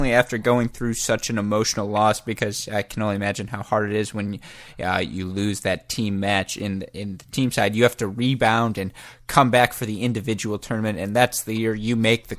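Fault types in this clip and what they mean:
No faults detected in this speech recording.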